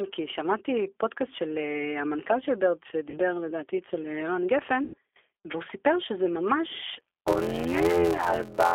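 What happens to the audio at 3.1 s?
From about 3.10 to 3.19 s the speech turns into a brief buzzy tone or coloured noise that fades rather than cutting out cleanly. This is VoIP packet loss concealed by the speech codec: roughly 40 ms of audio, which fits two 20 ms packets, went missing. The G.729 decoder filled the gap by repeating its last pitch and filter with falling gain, and because each frame builds on the last, the sound stays weak or distorted for tens of milliseconds or more after about 3.19 s.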